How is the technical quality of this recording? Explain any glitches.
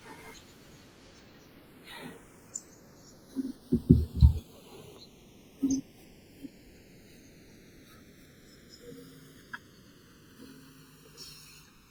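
The recording has one fault running from start to finish: the two channels drift apart. The left and right sides were evidently captured on devices with separate clocks that disagree by roughly 70 parts per million, so the delay between them grows steadily, reaching under a millisecond by the end. When the channels are summed to mono, the comb-filter notches this creates sweep slowly through the speech, giving a gradual flanging swirl. A fixed channel offset would instead leave a static, hollow coloration that never moves.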